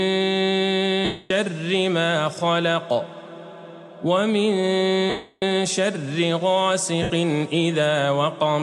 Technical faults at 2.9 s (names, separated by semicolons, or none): none